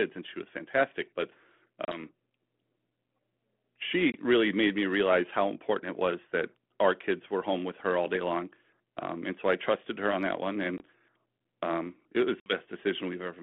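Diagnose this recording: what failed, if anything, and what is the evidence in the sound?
Network stage: packet loss on an ADPCM call. Hard silent gaps at 1.85, 4.12, 10.78 and 12.4 s, then slightly distorted returns while the decoder's predictor resyncs.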